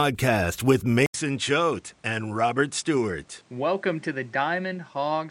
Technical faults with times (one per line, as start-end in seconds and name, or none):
1.06-5.31 input switched to a poorer device